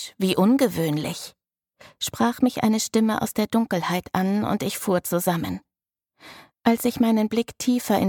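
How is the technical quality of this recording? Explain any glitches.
No glitches or technical faults can be heard anywhere.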